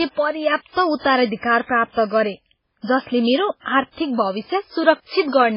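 Throughout the speech, heavy MP3 compression is the likely cause of a watery, swirly texture: nothing remains above 5.3 kHz, which fits a bitrate around 16 kbps.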